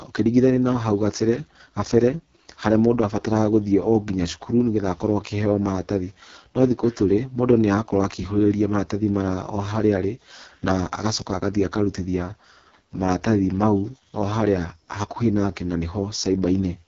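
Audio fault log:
Throughout: AMR wideband (HD Voice) codec. The speech sounds rough and raspy, which fits the codec's lowest 6.6 kbit/s mode. The voice is rebuilt from a crude excitation pulse pattern through a vocal tract model, with too few bits to shape it well. The band from 6.4 kHz is filled with synthetic noise. A spectrogram shows a hard ceiling at 7.1 kHz, blurred harmonics and grainy, noise-like texture at the top of the band.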